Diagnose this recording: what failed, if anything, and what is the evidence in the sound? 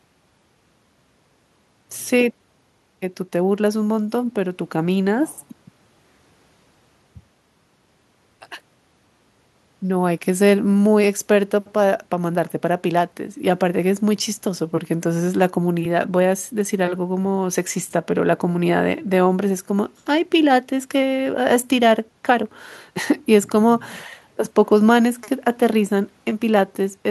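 Nothing failed; no faults heard.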